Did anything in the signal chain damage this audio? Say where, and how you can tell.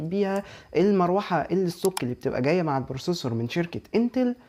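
No, nothing in the signal chain stood out on listening.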